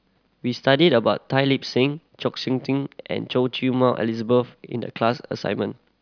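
No technical faults can be heard anywhere in this speech recording.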